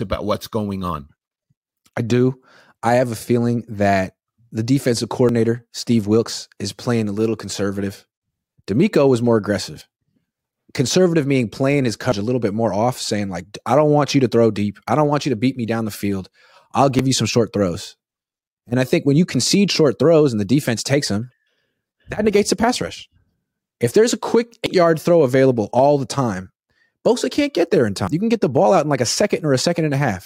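At 5.29, 9.81 (after "was more"), 12.12, 24.66 (between "there's a quick" and "yard throw available all") and 28.08 s (after "can't get there in") the speech skips ahead, losing roughly a tenth of a second, a bit more at 12.12 s. Unlike an underrun, no silence fills the gap. The likely cause is a dropped buffer (overrun), where samples were overwritten before being collected.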